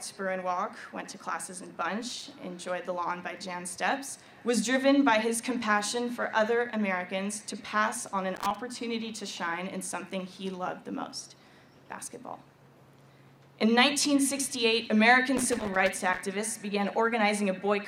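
Loose connector crackle bursts at 2.01–2.33 s, 8.36–8.56 s and 15.37–16.22 s: an intermittent contact chops the signal, producing irregular scratchy crackle.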